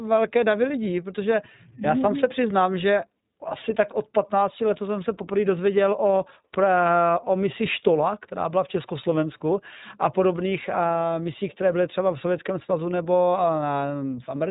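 From start to end the speech runs through the iLBC codec. Nothing above 3.8 kHz survives, so it sounds narrow. Each short frame is coded separately. The plainly audible roughness and synthetic edge fit 20 ms frames at around 15 kbps.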